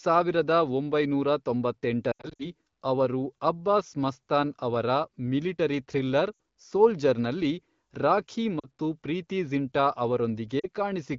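Lost AMR speech frames occur at 2.11–2.48 s, just before "ಅವರು ಅಬ್ಬಾಸ್ ಮಸ್ತಾನ್ ಅವರ", where gaps totalling 180 ms are scattered over 280 ms, the longest lasting 80 ms. Shorter losses follow at 6.33–6.39 s, between "ಮಸ್ತಾನ್ ಅವರ ಮಿಲಿಟರಿ ಥ್ರಿಲ್ಲರ್" and "ಸೋಲ್ಜರ್ ನಲ್ಲಿ ರಾಖೀ"; at 8.60–8.67 s, before "ಪ್ರೀತಿ ಜಿಂಟಾ"; and at 10.59–10.66 s. The decoder fills each gap by repeating the last good frame's pitch and spectral shape at falling gain, so a single lost frame gives a brief dip or warble, while runs of lost frames drop to near silence, with the voice coming back weak or rough for a moment.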